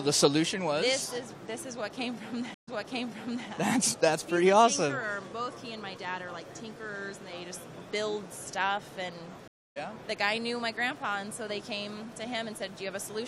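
Two stream reconnects break the audio. At 2.54 s the connection drops and the audio goes silent for 130 ms; a fresh decoder then starts mid-stream, fading in 0.81 s earlier, so that stretch repeats as the server resends buffered data. At 9.48 s a 282 ms gap follows, and playback resumes roughly 150 ms later, so a short section is skipped.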